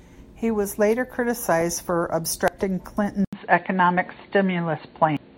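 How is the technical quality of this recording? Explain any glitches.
The recording has three glitches: two brief decoding faults and one change of input partway through.

Damaged data in a compressed stream, at 2.48 s and again at 5.17 s: corrupted bytes made the decoder misread frames and resynchronise on the next valid header. Each produces a tiny blip lasting only a few milliseconds.

Input switched to a poorer device, at 3.25 s through to the end: the sound drops out for 80 ms, then returns duller and boxier, with nothing above 4.5 kHz, roughly 5 dB different in level and with a new noise floor about 40 dB down. This most likely comes from a switch to a narrower-band microphone or headset.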